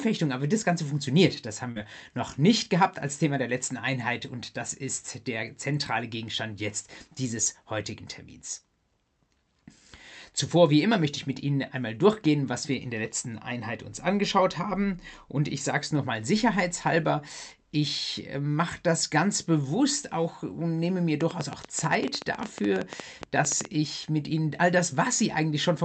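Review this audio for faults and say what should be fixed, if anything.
Short concealed packet loss at 1.71–1.79 s: about 40 ms never arrived, and the decoder extended the preceding sound to cover it, leaving a brief smear rather than a silent gap.

A train of clicks runs from 21.21 to 23.66 s: about thirty similar pops, roughly 10 per second at irregular spacing, peaking about 15 dB above the sound and continuing through pauses, so it is unlike codec distortion. The likely cause is interference or a faulty connection or power supply.

The call path itself shows its expected coding character with an upper limit near 8 kHz. Stabilise the network and jitter buffering, and shield the interfering equipment or repair the connection or power supply.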